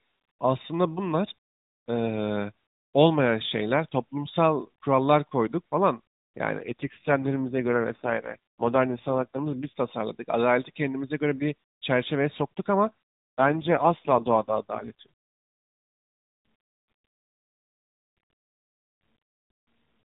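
Speech over a narrowband mobile path with an AMR rate drop from 6.58 to 9.78 s and 13.38 to 15.06 s. The voice turns buzzier and more synthetic without a gap or band change, which fits a switch from 12.2 to 4.75 kbps.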